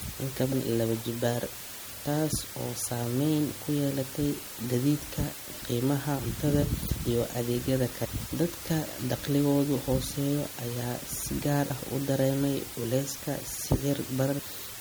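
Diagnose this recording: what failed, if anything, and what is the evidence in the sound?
The sample-format conversion stage stripped the resolution right down. From start to finish there's a constant, even hiss sitting only about 15 dB under the speech, with no grainy distortion riding on the quiet bits. That's low bit depth with dither: with so few levels available, the dither converts the rounding error into steady white noise rather than signal-dependent crunch. A floor that high fits roughly 6-bit samples.

The codec stage is likely also showing strain. The speech has a watery, swirly texture throughout, and the sibilants go metallic and chirpy. That's classic starved-encoder behaviour, likely MP3 compression at a low rate, something like 64 kbps. When bits run short, the encoder drops the treble above a fixed point and zeroes the weaker frequency lines, which then flicker on and off from frame to frame.

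There's a storage or playback fault too: compressed frames skipped at five points. The jumps are at 0.51 s (about 200 ms gone), 6.18 s (about 200 ms, between "ku yeelatay gaadiidka qiimaha" and "cuntada iyo adeegyada"), 8.04 s (about 300 ms, after "qiimaha cuntada iyo adeegyada"), 11.69 s (about 100 ms, after "ayaa si gaar") and 14.38 s (about 300 ms). Each join is a short smeared blip, not a click, because neighbouring frames overlap. The frames are 26.1 ms long, which matches the MP3 frame length.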